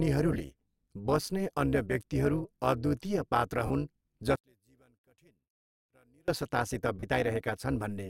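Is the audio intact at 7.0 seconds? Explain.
No. From 7.0 to 7.03 s the speech turns into a brief noisy smear, its tonal detail replaced by a hiss-like blur until the signal returns. These are lost LE Audio frames. A 30 ms gap fits about three 10 ms LC3 frames going missing over the Bluetooth link. The decoder filled the gap by repeating the last good spectrum with randomised signs and attenuating it after the first frames.

Under that dropout, and across the whole clip, runs a metallic buzz with extra tones around the voice, a ripple around 200 Hz with level swings of about 11 dB. This is overlap-add ripple. The audio was split into windowed frames and reassembled with an overlap whose windows don't sum to a constant gain, so the level rises and dips once per frame, roughly 200 times a second.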